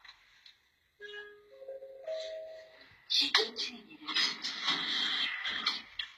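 Throughout the clip, the treble above the midrange has a synthetic, metallic sheen, and nothing is present above 14.9 kHz. This plainly audible damage is likely HE-AAC compression, with the upper band rebuilt by band replication, which fits a bitrate around 20 kbps.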